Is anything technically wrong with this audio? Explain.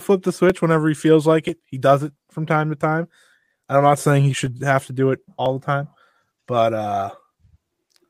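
Yes. From 0.50 to 7.44 s the speech carries regular clicks, about seven of them, one every 0.99 s. These are likely clock drift buffer slips. Two clocks disagree by roughly 700 ppm, so a shared buffer periodically drops or repeats a few dozen samples.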